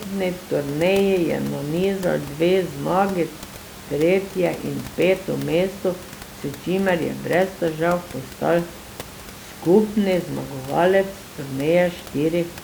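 Nothing in this speech recording points to a technical fault, and the only other thing to hear is a bit of room noise sitting about 17 dB below the speech, which comes from the space the microphone was in rather than from the system.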